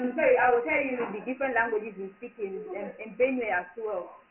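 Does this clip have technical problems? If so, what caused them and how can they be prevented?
Yes. The sound was encoded as Dialogic VOX ADPCM, storing each sample as a coarse 4-bit step. Nothing remains above about 2.9 kHz, which points to a 6,000-samples-a-second VOX file, inside a 200 Hz to 3.4 kHz line band, and heavy gritty hiss trails the speech throughout. Storing at a higher sample rate or with a linear PCM format would prevent this.

From 0.0 to 1.0 s there is channel delay (doubling): one channel runs 40 ms behind the other, and summing both to mono lays a late copy over the original at equal level, so the opening sounds doubled with a close slap. Aligning the channels before the mono fold-down would prevent it.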